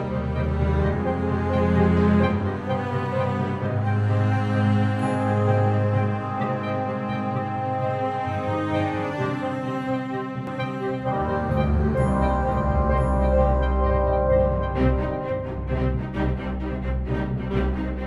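A doubled audio track starts abruptly at 10.47 s and runs to the end: a second, full-band copy of the audio trails the original by about a second, sitting roughly 5 dB lower. The late copy carries no decay or room colour, so it sounds like a clean duplicate rather than an echo. The likely cause is the same signal being captured again through a slower path, or an edit leaving two copies out of step.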